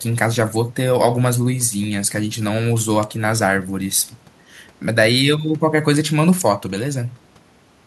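Nothing technical stands out in this short speech recording; it's a fault-free take with no trouble anywhere to flag.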